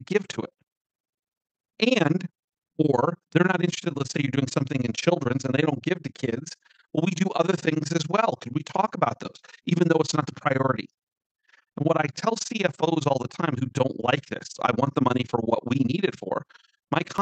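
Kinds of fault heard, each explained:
Overlap-add ripple: The speech has been split into windowed frames and rejoined with an overlap whose window gains do not add up to a constant, so the level dips and recovers once per frame for the whole clip. Here the swing is extreme, about 60 dB between peak and trough, repeating at around 20 Hz. The result is a harsh, chopped flutter over the speech, close to a rapid on-off gating rather than a gentle tremolo.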